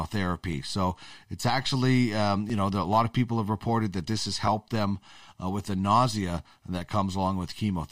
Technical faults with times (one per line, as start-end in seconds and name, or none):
0.53-6.45 clock drift buffer slips